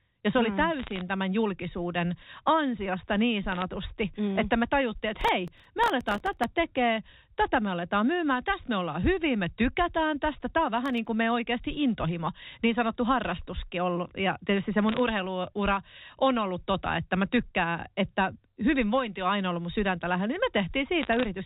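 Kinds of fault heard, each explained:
Bit errors on a digital phone line: flipped bits in the 8-bit telephone samples each corrupt a single sample, giving sharp ticks and crackle over intact speech; heard as short crackle bursts at 0.80–1.01 s, 3.52–3.62 s, 14.89–14.99 s and 21.01–21.25 s.
Processor overload crackle: audio buffers of roughly 1.5 ms missed their deadlines and were filled with stale audio, leaving hard-edged repeats that sound like gritty tearing; a long burst runs from 5.21 to 6.44 s and a brief one at 10.86–11.06 s.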